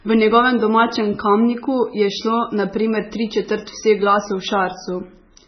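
From start to finish the speech carries heavy MP3 compression damage. The treble stops abruptly near 6 kHz, and the remaining sound has a watery, swirling texture as quieter frequency lines drop in and out between frames, with s sounds turning metallic and attacks smeared. This is likely a very low-bitrate encode, around 16 kbps. That frame-to-frame flicker separates it from a simple low-pass filter, which would dull the top without any warbling.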